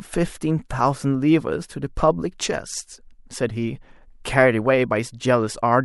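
Pre-echo strikes three times in the speech, at 0.69 s, 1.96 s and 4.24 s. Each time a hiss rises about 12, 15 and 13 dB above the quiet background for 16, 16 and 12 ms just before a sharp attack, which then sounds softened. The codec spread noise meant for the loud onset across its whole block, which fits a window of about 26 ms with no switch to shorter blocks. Unlike a click or dropout, this noise leads the attack.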